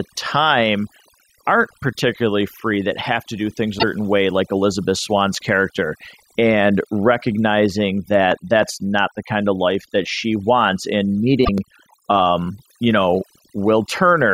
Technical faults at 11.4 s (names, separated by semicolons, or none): overdone noise removal; damaged data in a compressed stream